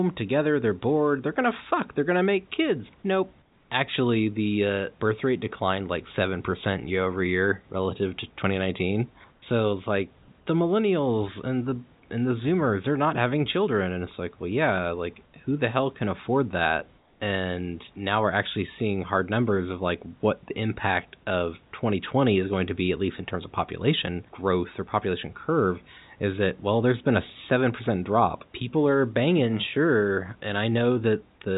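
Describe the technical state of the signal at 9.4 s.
Comfort noise in place of the background, 9.32 to 9.42 s: room noise turns into flat, featureless hiss about 4 dB quieter, likely receiver fill while transmission paused.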